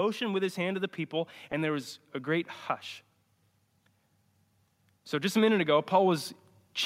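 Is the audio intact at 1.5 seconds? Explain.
No. Lost LE Audio frames at about 1.52 s leave a 10 ms gap in the Bluetooth stream, which fits a single dropped LC3 frame. The decoder hides the gap by repeating the last received spectrum with its signs randomised. Because the loss is so brief, concealment never reaches the fade-out stage. What you hear is a tiny noisy smear where the speech should continue cleanly, not a silence, sitting on top of the light codec coloration that runs through the whole clip.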